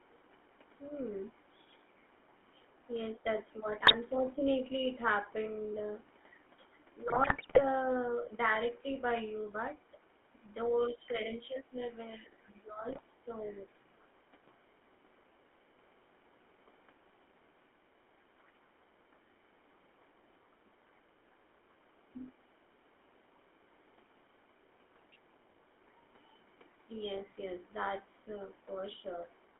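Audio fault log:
Throughout: GSM full-rate codec. The voice has a buzzy, gravelly roughness and a boxed-in band of roughly 250 Hz to 3.4 kHz, because the 13 kbps coder rebuilds speech from a vocal-tract model driven by sparse pulses. Unlike bit errors, this coarseness is steady rather than bursty.
3.8–3.96 s, 7.06–7.62 s, 12.88–13.01 s: GSM bit errors. Short bursts of squawking, pops and gargling break into the speech, the longest around 7.1 to 7.6 s. Corrupted filter, pitch or gain values bend the spectrum or spike the level frame by frame, which sets these apart from the codec's constant buzz.
10.9–11.79 s, 12.18–13.71 s, 20.66–20.72 s: speech suppressed in double talk. The talker's level sinks by up to about 15 dB, in pieces adding to about half a second and then about a second, with a briefer dip of about 10 dB near 20.7 s. The likely cause is an echo canceller turning everything down while both sides spoke. 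Here the voice itself drops, not the room sound.
13.46–13.53 s: other side's voice leaking through. A faint scrap of a second voice, about 30 dB below the talker, slips in for a moment, likely loudspeaker echo the canceller failed to remove. It adds sound rather than taking any away.
29.54–29.6 s: background gated by the echo canceller. In the last instant the room sound dips by about 8 dB for about 70 ms as the canceller clamps the microphone. Only the background drops, which separates it from the double-talk cuts.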